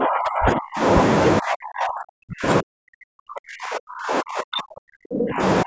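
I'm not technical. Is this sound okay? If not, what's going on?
No. This is most likely speech suppressed in double talk: when both people on a call talk at once, the echo-cutting part of the call can't tell this talker apart from the other person's voice coming out of the loudspeaker, so it turns everything down. Here the voice drops sharply, at times to near silence, from the start to 0.83 seconds, and again from 1.4 to 5.42 seconds.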